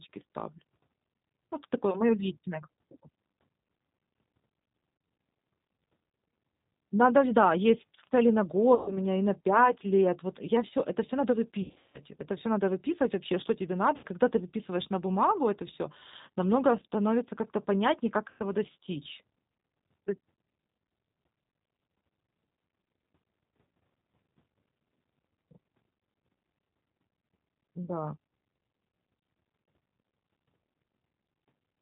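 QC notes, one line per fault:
Throughout: G.729 codec. The speech has the typical 8 kbit/s G.729 sound, with the damage plainly audible. Everything above 4 kHz is missing, so it sounds boxed-in and phone-like. The rough, slightly synthetic edge comes from the decoder rebuilding each 10 ms frame from a vocal tract filter, a pitch predictor and a handful of pulses instead of the real waveform.
8.75 to 8.99 s, 11.62 to 12.00 s, 13.97 to 14.06 s, 18.30 to 18.42 s: VoIP packet loss concealed by the speech codec. Audio went missing in each of these spots. The first gap is about 120 ms, then 60 ms at 13.97 s and 100 ms at 18.30 s. The 11.62 s hit is worst: about 280 ms lost in pieces across 320 ms, with one run of 160 ms. In each gap the decoder keeps extending its last pitch and filter at falling gain, which stretches the sound into a buzzy tone or coloured noise that fades. Each frame builds on the one before, so the speech stays weak and smeared for a moment after the audio comes back.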